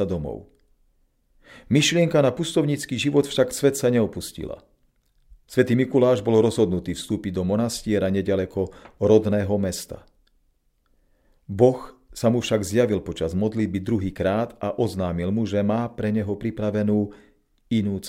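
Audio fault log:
No faults are heard in this speech recording. There is nothing to log.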